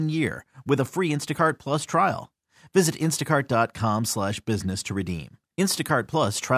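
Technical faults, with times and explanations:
No technical faults are detected in this speech recording; the signal holds steady without any interruption or disturbance from the transmission or processing chain.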